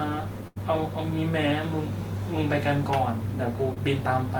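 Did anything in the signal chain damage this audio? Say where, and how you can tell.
Yes. A burst of packet loss at 0.47 to 0.58 s, a network fault: about 80 ms of speech never arrived in time. The receiver continued the last sound for 83 ms, fading it into a held buzz or hiss, and the speech then resumes with that section missing.

A short concealed packet loss at 3.74 to 3.78 s, also in the network: about 20 ms went missing. The decoder bridged it with 22 ms of continued sound before blending back into the real audio, which is heard as a brief smear or wobble.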